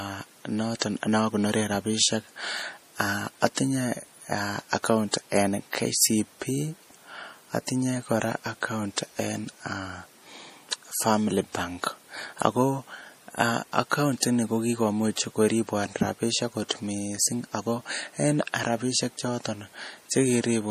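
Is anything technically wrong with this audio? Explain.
Yes. Throughout the speech there is plainly audible MP3 compression damage. With bits this scarce, which fits about 40 kbps, the encoder likely cut all content above 15.3 kHz and dropped weak frequency lines frame by frame. The sound turns watery and swirly, s sounds chirp metallically, and a spectrogram shows a flat ceiling at 15.3 kHz with flickering holes below it.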